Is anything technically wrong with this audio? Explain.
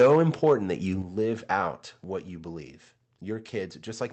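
Yes. From 0.0 to 0.53 s there is microphone overload, likely from input gain set too high. Peaks run about 5 dB past the converter's ceiling, so roughly one sample in twenty is clipped. The speech gets a harsh crackle, and the waveform shows flat-topped peaks.

The microphone volume is also stepped down twice, likely by the call software reacting to that overload. The first step, about 3 dB, comes at 0.02 s. The second, about 6 dB, comes at 1.02 s. Each appears as an abrupt drop in the waveform envelope and a sudden darkening across the spectrogram.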